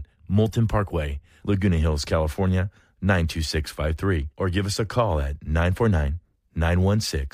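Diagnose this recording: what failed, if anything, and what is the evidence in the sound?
Nothing failed: no stage of the chain, from wiring and conversion through processing, transport, storage and playback, leaves an audible mark anywhere in the speech.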